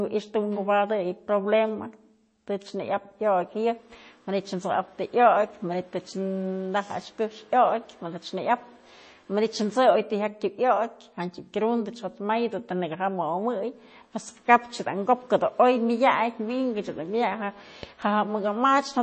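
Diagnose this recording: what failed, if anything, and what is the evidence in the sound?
What's gone wrong here is at the codec stage, and it's audible the whole way through. The speech has that watery, swirly quality, and the s sounds pick up a metallic chirp. That's MP3 compression, likely run at a bitrate around 32 kbps. With so few bits, the encoder keeps dropping weak frequency lines in and out from frame to frame, which gives you the swirl.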